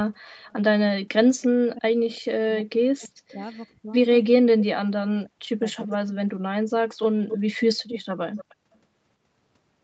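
Faint echo leak appears at 0.48–0.53 s and 1.41–1.47 s: a quiet repeat of the speech trailing it by about 332 ms, likely from a loudspeaker copy slipping past the far end's echo canceller. Because it is a delayed duplicate, it is not reverb or crosstalk.

From 1.72 to 3.93 s, speech is suppressed in double talk, dipping and cutting out in pieces for roughly one and a half seconds, at worst by about 40 dB. A 332 ms echo runs at 2.11–3.34 s. Unlike a dropout, the gaps likely track the overlap with the other talker.

A second suppressed stretch, 4.78–6.03 s, removes about a second of speech. Echo returns at 5.81–6.14 s with a shorter 279 ms delay, then grows louder at 7.01–7.37 s and 7.91–8.77 s, to about 10 dB below the direct speech.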